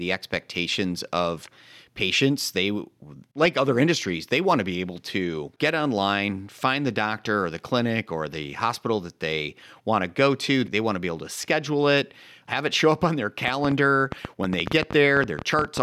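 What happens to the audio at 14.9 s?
At 14.9 s the speech sits inside a train of clicks running from 13.48 s to 15.78 s. Sharp pulses of much the same shape arrive about 8.7 times per second, at an uneven pace, around twenty in all. They stand out well above the speech, peaking roughly 15 dB over it. They are heard as a ragged ticking laid over the sound, pauses included. The likely cause is electrical interference or a faulty connection or power supply.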